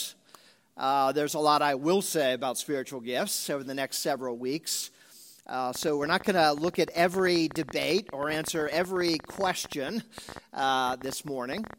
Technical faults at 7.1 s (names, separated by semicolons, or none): train of clicks